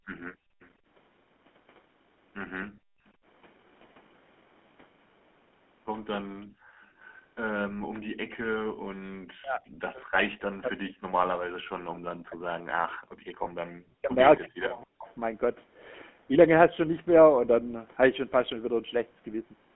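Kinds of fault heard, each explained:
GSM full-rate codec: The whole clip has that buzzy, gravelly grain you get from the original GSM codec, which rebuilds the voice from a vocal-tract model fed by a sparse pulse train. The damage is plainly audible. The band sits roughly between 200 Hz and 3.4 kHz, so the voice sounds narrow and boxy, and the roughness fits the 13 kbps full-rate coder.
Echo leak: Between 0.33 and 0.7 s there's a very faint delayed copy of the speech trailing about 266 ms behind, sitting something like 35 dB under the main voice. It's most likely a loudspeaker echo on one side that the echo canceller didn't fully scrub out, so a scrap of the call leaked back down the line.
Speech suppressed in double talk: From 9.36 to 15.08 s the talker keeps dipping and dropping out in pieces, adding up to roughly 4 s of affected audio, with the deepest dips around 40 dB, so in places the voice nearly vanishes. 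That pattern is likely the echo canceller hearing both sides talking at once, failing to tell the talker from the echo, and ducking everything.
Lost GSM frames: Right around 13.44 to 13.47 s there's a tiny rough, metallic hold where the decoder had to fill a gap by repeating the previous good frame's settings. It's very short, about 20 ms of missing audio, which points to a single dropped frame, so it comes across as a brief ringing blip.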